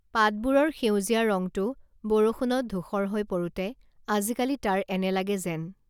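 No technical faults can be heard anywhere in this recording.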